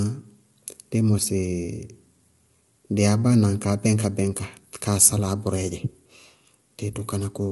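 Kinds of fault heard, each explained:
Low-delay AAC compression: The speech sounds plainly rough and grainy throughout, and nothing is heard above 11.7 kHz. The likely cause is a low-delay AAC coder whose short frames capture pitch harmonics poorly. The damage fits a bitrate around 32 kbps.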